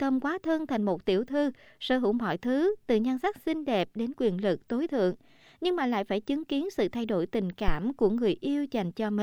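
At 7.68 s, right after "sự thay đổi tình", a phantom power thump cuts into the speech and lasts until about 7.75 s. A supply voltage was switched on or off on a live input, and that sudden DC step passed through the coupling capacitors into the signal path. It sounds like a deep, blunt low-frequency knock peaking at about -12 dBFS, with a fast tail that dies away in roughly 16 ms.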